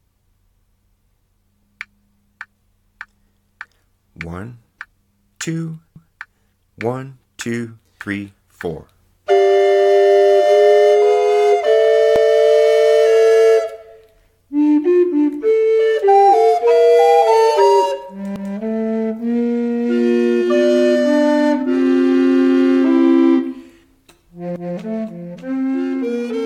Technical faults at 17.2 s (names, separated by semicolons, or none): none